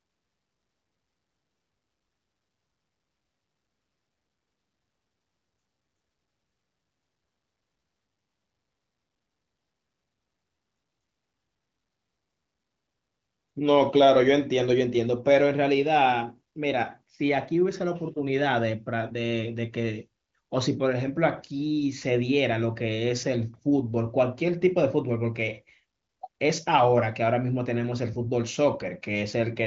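No technical faults are audible.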